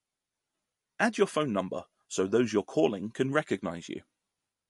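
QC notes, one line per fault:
throughout: MP3 compression, treble gone above 11.3 kHz with watery, swirling artefacts a plain low-pass wouldn't leave, likely from encoding near 48 kbps.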